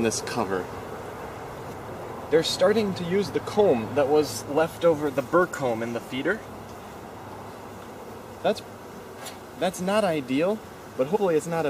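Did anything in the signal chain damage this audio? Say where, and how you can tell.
Yes. Compressed frames skipped at the codec stage: the audio jumps ahead roughly 70 ms at 7.04 s and roughly 100 ms at 11.15–11.17 s. Jumps fitting whole 23.2 ms frames show the decoder dropped them.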